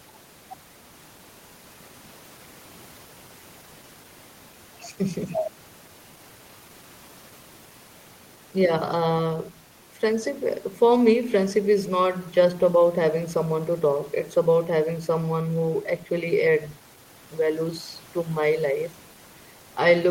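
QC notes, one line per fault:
No faults found on review; the speech holds steady throughout with nothing to flag.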